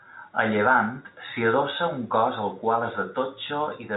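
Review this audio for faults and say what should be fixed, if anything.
Nothing here needs fixing: it's ordinary G.711 telephone-coded speech, with the top end stopping at about 3.8 kHz as that format does.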